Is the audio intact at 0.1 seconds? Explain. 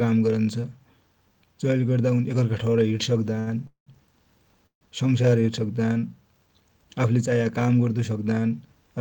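Yes, the audio is intact at 0.1 seconds, with no fault audible at that moment.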